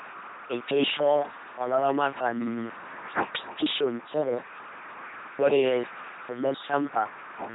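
From the start, the speech has the buzzing, mechanical robot sound of an LPC-10 vocoder, which fits a 2.4 kbit/s stream. A ten-pole filter is driven by pulses or noise. Damage is heavy. Nothing sounds above 3.9 kHz.

Hard clipping follows at 3.59 to 3.84 s, 5.42 to 5.67 s and 6.50 to 6.99 s. Peaks overran a stage by about 1, 4 and 2 dB. Their tops were cut flat, adding crackle on peaks, worst at 5.42 s.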